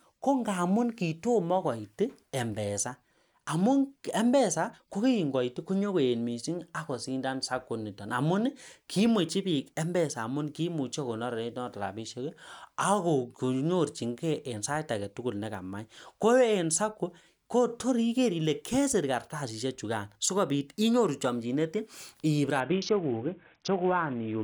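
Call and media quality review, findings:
Speech. Bluetooth SBC bit pool drop, 22.60 s to 24.43 s. Treble dulls, gritty noise rises. Probable component: phone's SBC encoder on a congested link. Bit pool cut, consistent with roughly 28 down to 5, about 54 kbps. Upper sub-bands starved, rest coarsely quantised.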